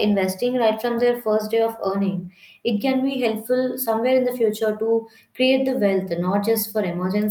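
No technical faults can be heard anywhere in the speech recording.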